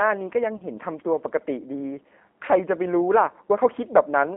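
Throughout, the speech passes through a G.729 codec, its low-rate CELP coding fitting 8 kbit/s, band-limited to roughly 250 Hz to 3.6 kHz, leaving it thin, rough and plainly synthetic. From 0.57 to 0.61 s, VoIP packet loss concealed by the speech codec fills a 30 ms gap with extrapolated pitch and filter, heard as a brief, fading smear.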